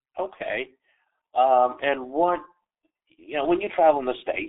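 Throughout, the speech carries G.723.1 codec damage. Nothing above 3.8 kHz survives. Heavy, slow-updating low-bitrate coding, fitting about 6.3 kbit/s, leaves it muffled and hoarse.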